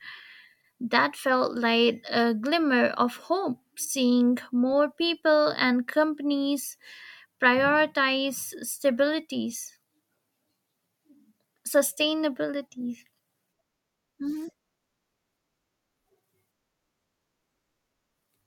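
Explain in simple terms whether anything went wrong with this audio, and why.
Nothing went wrong; no faults can be heard.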